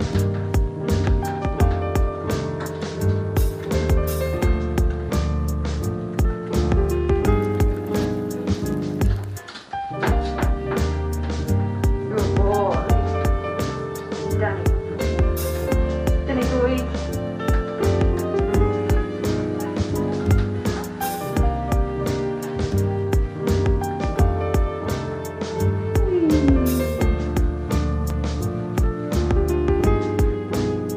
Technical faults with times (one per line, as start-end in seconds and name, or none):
28.10 block of digital silence